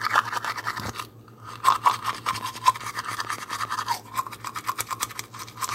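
From 2.13 to 3.66 s a train of clicks ticks over the sound at a steady 7.2 per second, around ten sharp pulses peaking roughly 10 dB above the signal, likely from electrical interference or a faulty connection. The waveform shows evenly spaced, similar spikes, and the spectrogram shows thin full-height vertical lines.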